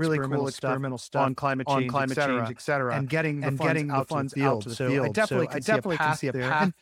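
Speech with a doubled audio track throughout: a full-band copy at about equal level trails by roughly half a second, likely a second capture path running late.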